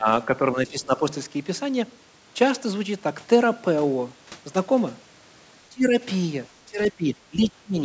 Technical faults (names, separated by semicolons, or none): speech suppressed in double talk